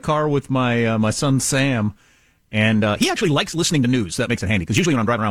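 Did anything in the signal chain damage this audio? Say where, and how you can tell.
Yes. A time-stretched section: processing likely sped the audio 1.54 times from 2.75 s to the end, dropping short pieces. Pace jumps, pitch holds, and the sound turns rushed.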